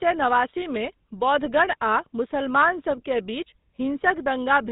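GSM full-rate codec damage runs throughout this speech clip, from start to finish. The codec models the vocal tract and excites it with sparse, evenly spaced pulses, so the speech comes out plainly buzzy and gravelly, and nothing survives above 4 kHz. The roughness fits the 13 kbps full-rate mode.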